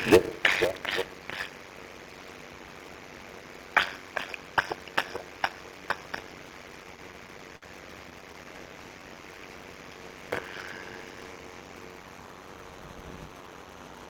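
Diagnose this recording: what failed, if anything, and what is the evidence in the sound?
Block size mismatch (padded), at the driver or buffer stage, runs through the whole recording. A steady 93.8 Hz buzz sits under everything, and the audio plays at 0.625 times speed at normal pitch. This fits 320-sample writes zero-padded into 512-sample reads. The waveform shows regular flat gaps, and the spectrogram shows harmonic lines at 93.8 Hz multiples.

Repeated stalls (stutter) are a network and jitter buffer fault. From 6.83 to 7.64 s there are six hiccups, the longest 52 ms, and from 8.10 to 8.46 s four short ones, none over 12 ms. The receiver stretched the last sound each time without dropping anything. The waveform shows repeated copies, fading in the longer gaps, and the spectrogram shows smeared, held frames.

Jitter buffer slow-down, also at the receiver, runs from 8.53 to 9.41 s. About 98 ms of repeated pitch periods were inserted, so this stretch plays at 90 percent speed with unchanged pitch. 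The waveform shows duplicated cycles, and the spectrogram shows harmonics stretched sideways without shifting in frequency.

Jitter buffer speed-up runs from 11.38 to 11.83 s. Roughly 70 ms of pitch periods were cut to drain excess delay, so the audio hurries at 113 percent speed while its pitch holds. The waveform shows spliced, shortened cycles, and the spectrogram shows compressed events with steady harmonic spacing.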